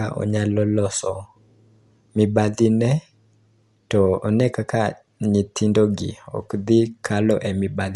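From start to finish the speech is band-limited, with nothing above about 11.4 kHz, and it sounds dull, with a rough, fluttering noise around voiced tones. The likely cause is Dolby Digital compression at a low bitrate, which fits roughly 64 kbps. Short of bits, the encoder narrows the band and leaves many frequency lines without mantissa data. The decoder fills those gaps with dither noise, producing the audible grain and flutter.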